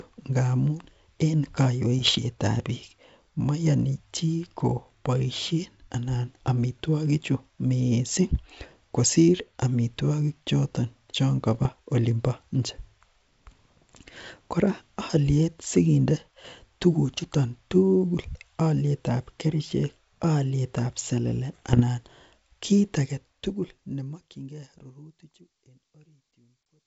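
Bit errors on an ADPCM link hit at 1.99 to 2.18 s, 11.54 to 11.71 s and 21.53 to 21.82 s. Flipped bits derail the decoder's step size and predictor. Each burst crackles with pops and jumpy level, at an error rate under one percent.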